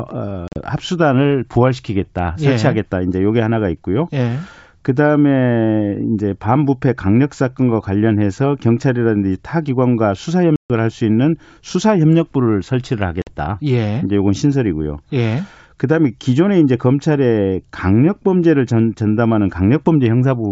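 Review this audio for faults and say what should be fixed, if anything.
Packet loss on an ADPCM call at 0.48–0.59 s, 10.56–10.71 s and 13.22–13.33 s leaves hard-edged silent gaps, about 140 ms at 10.56 s. Each time, the decoder's predictor and step size drift from the sender's, so the sound returns clicky, distorted or mis-levelled before settling. To prevent it, add a jitter buffer with packet loss concealment and decoder state resets on the G.722 link.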